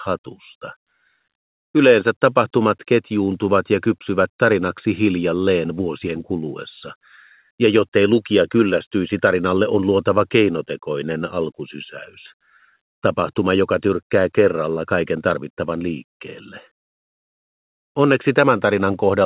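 No technical faults occur at any point; the audio comes through a G.711 mu-law call path with nothing above 4 kHz.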